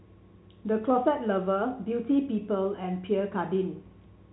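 No technical faults are audible in this speech, which shows the expected band limit of G.711 telephone coding, with nothing above 3.9 kHz, consistent with an 8 kHz A-law telephone channel.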